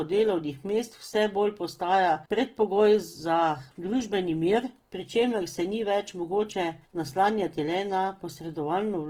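Opus compression runs throughout the clip, and this is likely its cause: plainly audible coding damage that gives the speech a rough, grainy texture. The coder appears to be working in its music-oriented CELT mode at a rate that fits around 16 kbps. It preserves each band's energy but, short of bits, fills detail with folded copies of lower bands or noise. Tonal parts therefore turn noisy and gritty rather than swirling. The bandwidth stays full, reaching about 20.2 kHz.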